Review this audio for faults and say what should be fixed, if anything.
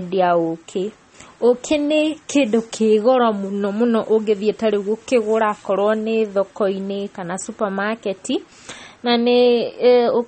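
Throughout, the speech sounds watery, with nothing above 8.4 kHz. This is likely MP3 compression at a low bitrate, around 32 kbps. Encode at a higher bitrate.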